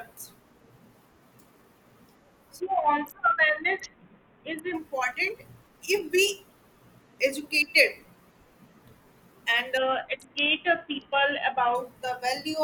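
Bluetooth SBC bit pool drops at 2.6–4.74 s and 9.77–11.75 s starve the upper sub-bands, dulling treble and adding gritty noise. This fits a bit pool falling from 28 to 5, near 54 kbps.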